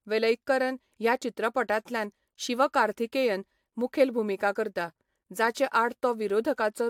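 Generation loss runs throughout. The speech sounds swirly and hollow, attacks blur, and nothing sits above 19.2 kHz. This is likely AAC re-encoding, about four times over.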